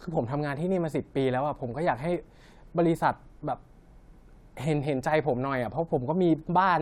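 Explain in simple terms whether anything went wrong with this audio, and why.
Nothing went wrong here; the speech comes through steady and intact the whole way, with no dropouts, glitches or odd noises to point to.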